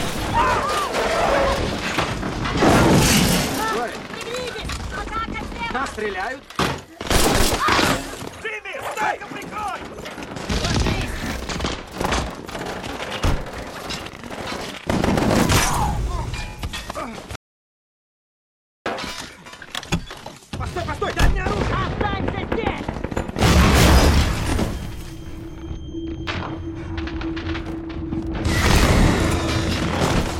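At 17.36 s the sound cuts out mid-flow into dead silence, with no room tone at all, and picks back up at 18.86 s. That's an audio dropout to silence of about 1.5 s, likely a lost input while the recorder kept writing silence.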